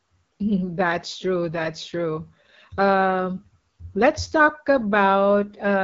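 Throughout, the speech carries AMR wideband (HD Voice) codec damage, plainly rough and raspy, suggesting about 8.85 kbit/s; a spectrogram shows nothing above 7.5 kHz and noise-like texture high up.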